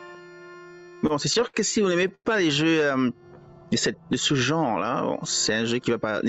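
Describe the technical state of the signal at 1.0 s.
At 1.0 s the audio is inside a run of repeated stalls (stutter) lasting from 0.79 to 1.57 s. Packets arrived late, so the jitter buffer emptied seven times. Each time the receiver stretched the last sound to cover the wait, about 141 ms in total, with the longest stall about 62 ms. Nothing is lost, but the sound drags and stutters.

Gain pumping is also present here and across the whole clip, with level swings of around 15 dB. The likely cause is gain set far too high, with a fast limiter pulling it back down.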